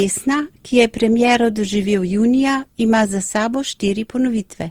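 Repeated lossy re-encoding, likely an Opus chain at around 48 kbit/s run through roughly seven times, has left this speech recording with generation loss across its whole length. Each decode and re-encode quantised the signal again on a shifted frame grid, so the noise stacked up. The result sounds swirly, smeared and hollow, more degraded than a single pass at that rate would be, and consonant attacks are blurred.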